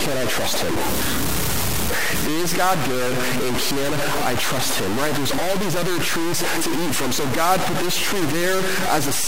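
From the first moment to the end, the speech is coated in harsh, crunchy grain, with the distortion riding as loud as the voice itself. That points to low bit depth without dither, likely a 3-bit truncation. With so few levels, every sample gets chopped down to a coarse step, so the error tracks the signal. Softer syllables turn to gravel, and the quiet tails sputter between steps or simply drop out.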